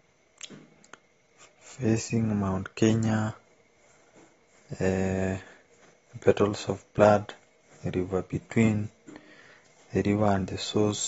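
Throughout the speech the sound is dull and smeared, with nothing above 7.6 kHz and a watery, warbling texture on sustained sounds and sibilants. This is likely AAC compression, with AAC-LC starving the spectrum at a low rate that fits around 24 kbps.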